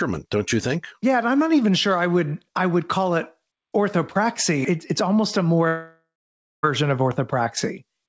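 At 5.68 s the sound cuts out and doesn't properly return until 6.65 s, which sounds like a long network dropout. The likely cause is that packets stopped arriving for nearly a second. The receiver tries to cover the gap by stretching the last bit of sound into a fading buzzy smear, and for the final half-second or so there's just silence. Once the sound resumes, that missing stretch is gone for good. Throughout, nothing sits above 8 kHz, which fits a wideband call codec such as G.722.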